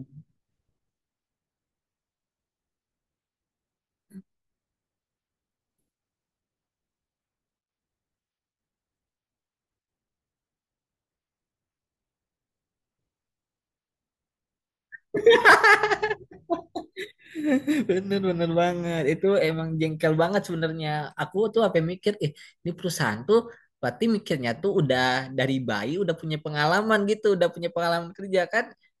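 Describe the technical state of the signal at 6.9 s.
At 6.9 s the speech signal is intact, with no audible technical fault at that moment.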